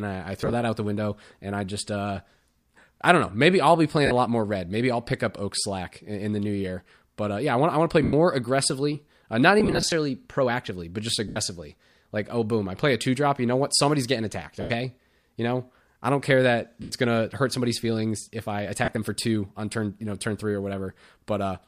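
Lost LE Audio frames break up the speech at 0.41–0.53 s, 4.06–4.11 s, 8.04–8.13 s, 9.60–9.92 s, 11.28–11.37 s, 14.61–14.70 s, 16.82–16.92 s and 18.85–18.95 s. The gaps are 50 to 180 ms long, some of them scattered as runs of short drops. The longest run is about 90 ms, at 8.04–8.13 s and 14.61–14.70 s. The drops fall on a 10 ms grid, likely LC3's frame size.

The decoder fills each drop by repeating the last spectrum with scrambled phase. Voiced sound turns into a grainy, hissy smear and then sags toward quiet.

On a spectrogram, harmonic lines blur into blocky broadband noise in 10 ms steps. On the waveform, clear periodic cycles give way to fuzzy, fading patches.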